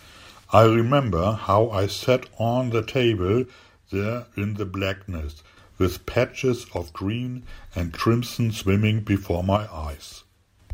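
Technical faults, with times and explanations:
3.45 to 5.57 s, 6.77 to 7.42 s and 9.57 to 10.60 s, one channel drops out: the speech suddenly sinks by about 6 dB for each stretch, then jumps back up. That's likely one stereo side going missing, so the mono sum keeps only half of what both sides shared.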